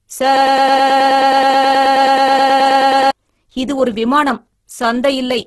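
From start to end, the speech has likely passed through Opus compression in its music-oriented CELT mode, starved for bits at a rate that fits something near 12 kbps. The encoder keeps each band's energy but fills the detail with folded or noisy content, so the speech comes out rough and grainy, with a hissy, textured edge instead of clean harmonics. The damage is heavy, and nothing is present above 12.1 kHz, leaving a capped, slightly dull top end.

From 0.37 s to 3.11 s, a broken-record loop takes over. The playback or stream likely stalled and kept resending the last fragment it held, a piece about 106 ms long, repeated back to back 26 times. The result is a rapid, mechanical stutter, a repetition of one tiny slice, and the audio that belonged in those seconds is gone. Normal speech resumes with "இது ஒரு விமானம்".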